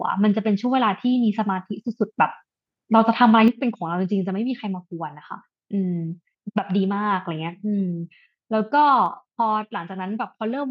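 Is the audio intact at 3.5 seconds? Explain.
No. At 3.48 s the microphone volume steps down. The speech and the background both drop by about 6 dB at once and stay quieter. This likely comes from call software lowering the microphone's input volume in a single step.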